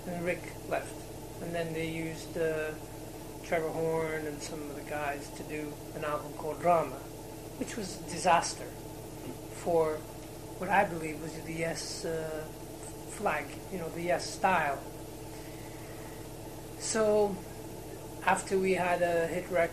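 From start to finish the audio sounds dull and gurgling, with a granular edge, most likely MP2 compression at a low rate, near 80 kbps. On a spectrogram the upper sub-bands switch on and off in blocks, leaving a ragged, flickering top end.

From 10.75 to 10.88 s comes DAB burbling: short blips of noise in single sub-bands. Bit errors at a rate of roughly 0.15% got past error correction, corrupting eight frames. The spectrogram shows short blips in isolated bands, and the waveform shows brief bursts.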